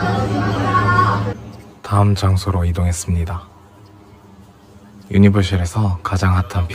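Channel delay (comb filtering) runs throughout. One channel lags about 10 ms before mono summing. Notches start near 50 Hz, spaced every 100 Hz, leaving a hollow, phasey sound.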